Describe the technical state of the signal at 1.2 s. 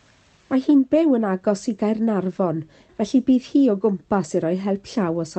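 At 1.2 s the speech comes through intact, with no fault, carried by the call path's codec, whose band-limiting to about 8 kHz and coding texture are its normal behaviour.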